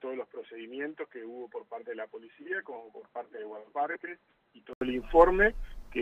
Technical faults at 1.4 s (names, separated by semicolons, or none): input switched to a poorer device